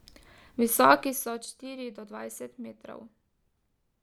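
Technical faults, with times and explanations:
0.93–1.43 s, zipper noise: a fast ticking rides on the speech as its level drops by about 15 dB, applied in unsmoothed 2 dB steps roughly fifteen times a second.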